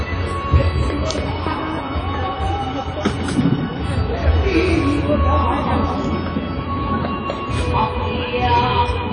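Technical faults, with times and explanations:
Throughout, WMA compression: a ringing, washy sound with breathing hiss and nothing above about 10.1 kHz, likely from a low-bitrate transform codec, which fits about 32 kbps.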